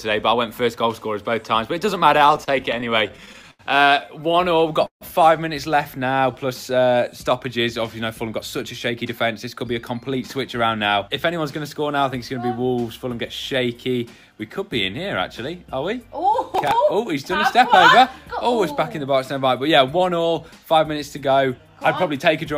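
Repeated stalls (stutter) occur from 2.09 to 3.61 s and again from 4.23 to 5.03 s. Packets arrived late, so the jitter buffer kept running dry and the receiver stretched the last sound to bridge each wait. The first stretch has 16 gaps filling 238 ms, with the longest 84 ms. The second has 6 gaps filling 184 ms, about 23% of that span, with one lasting 147 ms. Nothing is lost, but the sound drags and hiccups.

A jitter buffer slow-down follows from 5.99 to 6.33 s. The buffer was low, so the receiver repeated single pitch periods to rebuild its reserve, adding 39 ms. The audio runs at 91% speed with its pitch unchanged, so sounds are briefly drawn out.

A jitter buffer speed-up runs from 8.18 to 10.78 s. Too much audio had built up in the buffer, so the receiver trimmed short pitch-period slices again and again, removing around a fifth of a second in total. Playback runs at 108% speed at the original pitch and sounds slightly hurried.

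Processor overload crackle appears at 16.53 to 16.71 s. The processor missed a handful of deadlines on very small buffers of a few milliseconds each, and each miss replayed a piece of old audio with hard edges. Together these misses produce a brief gritty crackle riding on the sound, which stops once the load eases.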